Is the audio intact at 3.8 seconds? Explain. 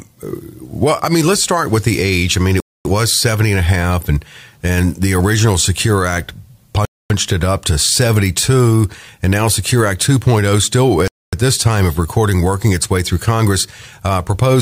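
Yes, the speech at 3.8 seconds plays through intact, with no dropout, click, distortion or other fault at that moment.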